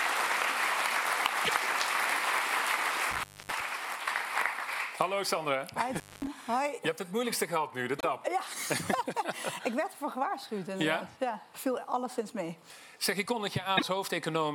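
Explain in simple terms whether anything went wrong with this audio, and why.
Two separate things went wrong here.

At 1.43, 7.98 and 13.77 s there's a quick glitch, about 64 ms, where the sound skips ahead. That's most likely a broken MP3 bit reservoir: frames went missing, and the next few 24 ms frames grabbed the wrong data.

Around 3.11 to 3.61 s and 5.95 to 6.27 s, the sound drops out for roughly a quarter second each time, with crackle at the edges and faint hiss in the gap. That's an intermittent contact, a loose cable or plug briefly opening.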